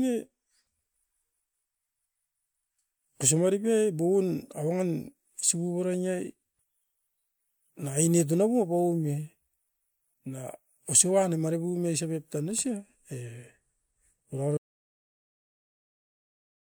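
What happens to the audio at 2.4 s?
Nothing goes wrong at 2.4 s: the speech carries on intact through that moment, with no dropout, click, glitch or other fault.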